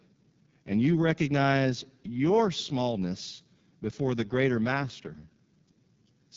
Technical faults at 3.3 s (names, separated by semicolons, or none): AMR wideband (HD Voice) codec